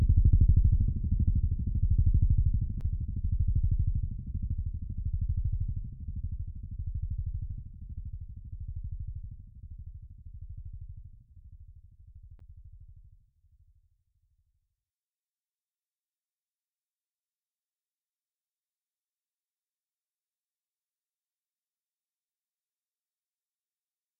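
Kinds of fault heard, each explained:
CD skip: the laser jumped to another turn of the disc's spiral, so at 2.80 s and 12.40 s the sound mutes for about 7 ms and 10 ms and resumes elsewhere. Unlike a plain dropout, the sound jumps ahead or back rather than pausing.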